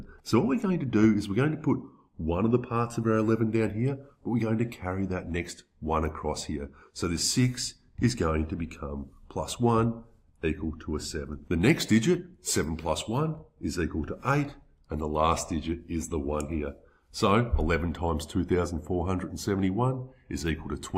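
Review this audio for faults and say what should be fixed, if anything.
Nothing stood out on listening, so there is nothing here that needs fixing.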